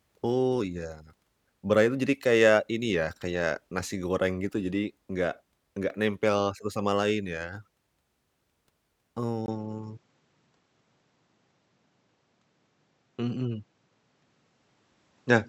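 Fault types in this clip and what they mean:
Input switched to a poorer device: at 9.46 s, after a 20 ms gap, speech abruptly dulls, nothing above 7.8 kHz, likely a device change, not filtering.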